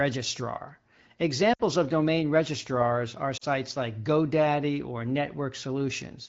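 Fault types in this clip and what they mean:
lost AMR speech frames: Radio errors corrupted frames, so the wideband decoder concealed them by reusing the last good pitch and vocal tract settings while lowering the gain. At 1.53 to 1.61 s 60 ms is lost and the sound fades to near silence within two frames, which fits three lost 20 ms frames, and at 3.37 to 3.45 s a 40 ms gap fits two. Each time the speech returns weak or rough for a moment.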